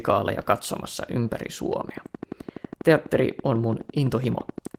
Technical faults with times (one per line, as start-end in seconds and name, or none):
1.73-4.75 train of clicks